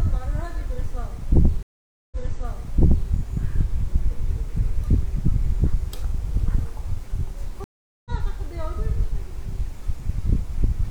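Stream reconnects occur at 1.63 s and 7.64 s. Each time the connection dropped and the player fell silent, then reconnected and started a new decoder partway through the stream. At 1.63 s the gap lasts 0.49 s, and the sound picks up about 0.98 s earlier than where it stopped, so a stretch repeats. At 7.64 s a 0.41 s silence is followed by a jump forward of roughly 0.2 s, skipping material.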